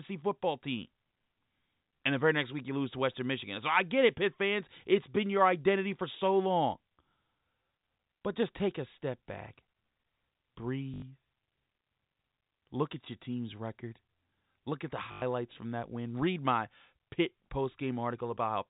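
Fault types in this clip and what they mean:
Packet loss with last packet repeated: missing audio was filled by replaying the previous packet. Gaps of 80 ms and 100 ms stutter robotically.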